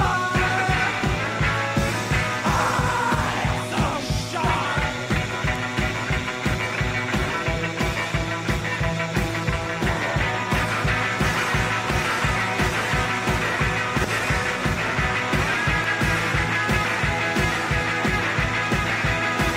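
No technical faults occur anywhere in the audio.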